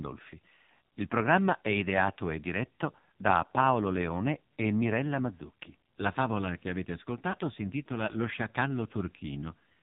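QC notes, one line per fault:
throughout: AMR narrowband mobile codec. Everything above 4 kHz is gone, and the sound comes across buzzy and synthetic because the codec rebuilds speech from a vocal tract model and a few pulses. The damage is heavy, which fits a low AMR-NB mode around 5.9 kbps.
7.32–7.35 s: lost AMR speech frames. There's a brief 20 ms dip or warble, which sounds like a single dropped frame. The decoder patched it by reusing the previous pitch and vocal tract settings at reduced gain, and the sound is weak or rough for a moment as it recovers.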